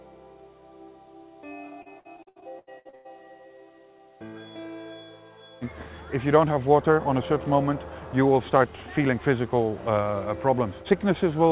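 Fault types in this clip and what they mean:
Repeated packet loss (robotic sound): from 1.82 to 3.07 s, ten dropouts of up to 98 ms are each patched by extending the preceding sound, giving choppy, robotic audio.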